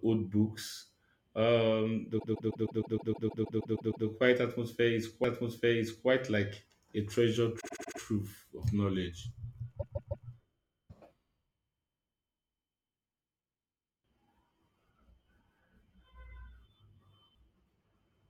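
Repeated frames break up this speech clip three times. From 2.18 to 4.06 s, a 156.7 ms slice plays twelve extra times, adding about 1.88 s. From 7.59 to 7.99 s, a 78.4 ms slice repeats five extra times, adding 0.39 s. From 9.79 to 10.26 s, a 156.7 ms slice returns three extra times, adding 0.47 s. A run of compressed frames was delivered more than once, so the decoder replays the same fragment. Each repeat sounds like a mechanical stutter. The slice lengths fit blocks of roughly 26 ms frames. A CD skip at 5.24 s brings a tick and a near-instant mute of a few milliseconds: the laser lost its track, jumped to another turn of the spiral, and resumed from a different point, so the sound lurches abruptly.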